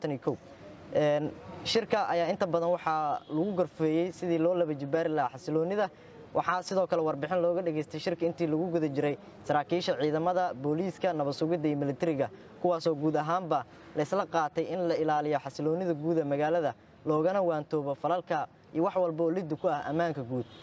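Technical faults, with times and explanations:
Nothing stood out on listening, and the call microphone processing can be heard only as the usual trimming of the deepest bass, with nothing above 8 kHz.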